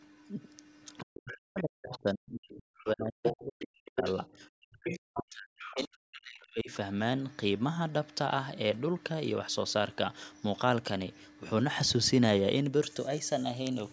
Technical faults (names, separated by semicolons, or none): speech suppressed in double talk; other side's voice leaking through